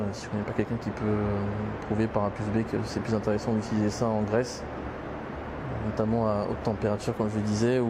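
Listening closely, nothing in the audio stood out as a technical problem at any point.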